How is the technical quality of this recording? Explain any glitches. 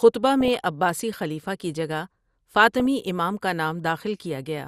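The speech has a dull, band-limited sound throughout with a gurgling, granular texture, and two short bursts of blipping distortion break in partway through.

The constant dullness and grit are likely MP2 compression at a low rate, consistent with roughly 80 kbps. MPEG Layer II divides the audio into 32 sub-bands and, short of bits, switches upper bands off and quantises the rest coarsely, so the top end flickers and the remainder turns grainy.

From 0.41 to 0.56 s, and again from 2.80 to 2.86 s, the speech is overlaid with short blips of noise in single sub-bands. This is DAB burbling: a small residual bit error rate, around a few tenths of a percent, slipped past error correction, corrupting samples in the audio data.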